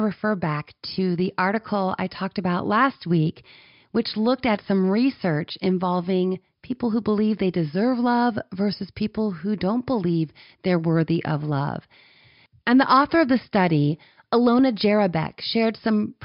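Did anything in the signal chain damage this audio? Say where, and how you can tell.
No, nothing in the signal chain audibly damaged this speech recording, and the signal shows no trace of harm from any stage between capture and playback.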